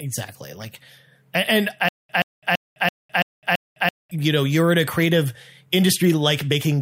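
From 1.89 to 4.11 s the speech hits a stutter with silent gaps: a 126 ms fragment repeats six times, each followed by about 208 ms of dead silence, roughly every 334 ms. It's likely a stalled stream replaying its last chunk, and normal audio resumes at "you know you're in".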